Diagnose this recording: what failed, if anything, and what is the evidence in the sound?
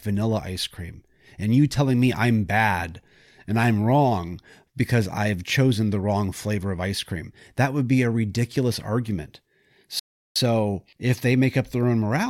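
A rebuffering stall at the playback stage. At 9.99 s the speech drops to silence, then resumes at 10.36 s exactly where it stopped. The player's buffer ran dry and waited for more data. Nothing is lost, but about 364 ms is added.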